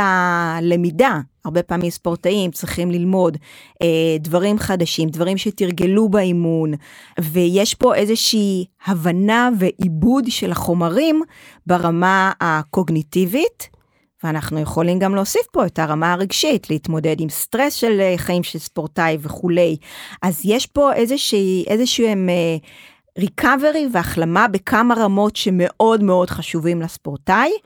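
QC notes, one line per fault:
1.81–11.84 s, periodic USB or driver dropouts: something stalls the USB bus or audio driver every 2.0 s, so about seven brief chunks of speech, each around 10 ms, are lost and replaced with silence, heard as evenly spaced ticks cutting into the sound.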